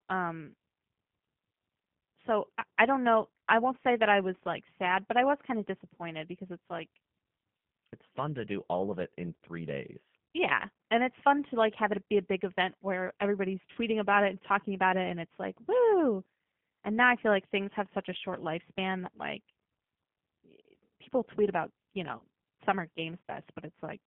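Throughout, the speech sounds rough and synthetic, consistent with an 8 kbit/s G.729A codec. A spectrogram shows nothing outside roughly 150 Hz to 3.5 kHz, with smeared harmonics.

At 13.72 to 13.78 s, after "big event where everybody's" and before "about it and talking", and again at 22.18 to 22.22 s, after "people tweet about you", VoIP packet loss concealed by the speech codec stretches the last sound into a fading buzzy tone or coloured noise, which fits a single 30 ms packet lost each time. The waveform shows a short, repetitive, decaying stretch.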